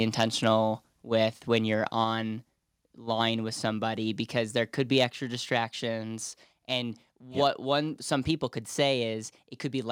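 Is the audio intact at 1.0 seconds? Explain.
No. At 1.02 s the microphone volume stepped down: speech and background noise drop together by about 3 dB in one instant step, likely from call software lowering the input gain. Unlike a gradual fade or compressor pumping, the level stays down afterward.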